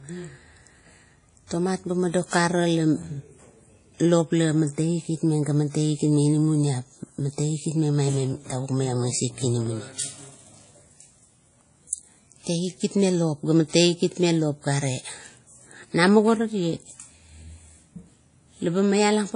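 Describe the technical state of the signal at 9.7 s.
At 9.66 s there is a block of digital silence, about 2.7 ms long, which fits a 128-sample buffer. The audio drops straight to zero and returns with no fade. Too short to hear as a gap, it comes through as a tick.

Around that moment, as across the whole clip, the speech sounds ringing and washy. A hiss rises and falls with the signal, and nothing is heard above 10.1 kHz. The likely cause is WMA compression at a low bitrate, which blurs quantisation noise across long transform blocks.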